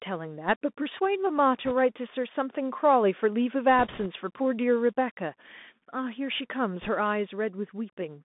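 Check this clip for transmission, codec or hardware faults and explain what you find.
Two faults show up: the speech runs through a Bluetooth CVSD headset codec throughout, and there are three short bursts of bit errors on the Bluetooth voice link.

Throughout, the CVSD headset codec keeps the speech inside roughly 200 Hz to 3.6 kHz, consistent with a 64 kbps one-bit stream. The adaptive step can't keep up with sharp sounds, so s sounds get scratchy over a grainy hiss.

At 1.65–1.72 s, 3.79–4.07 s and 6.81–6.89 s, flipped bits, roughly a couple of percent, add a rushing crackle. Each bit carries little weight, so there are no loud clicks.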